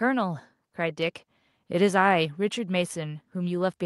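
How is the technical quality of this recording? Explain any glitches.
No glitches or technical faults can be heard here.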